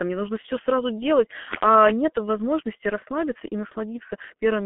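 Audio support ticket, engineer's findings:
G.723.1 codec, throughout. Speech muffled and hoarse, consonants smeared; nothing above 3.6 kHz, telephone band roughly 200 Hz to 3.4 kHz. Low-rate coder at 6.3 kbit/s, 30 ms frames, slow voice-model updates. Heavy codec damage.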